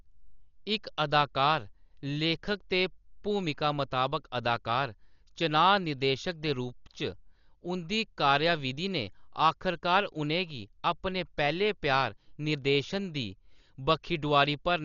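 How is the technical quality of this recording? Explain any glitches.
The quality is poor throughout the speech. The likely cause is heavy Dolby Digital compression at a very low bitrate, around 40 kbps. The encoder cut the band off at 6.9 kHz and left many frequency lines without bits, so the decoder fills them with noise. The sound is dull, with rough fluttering around tones. A spectrogram shows a hard ceiling at 6.9 kHz and speckled noise between the harmonics.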